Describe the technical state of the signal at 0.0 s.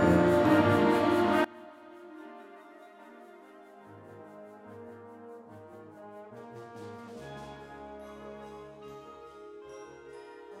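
At 0.0 s the signal is intact, with no audible technical fault at that moment.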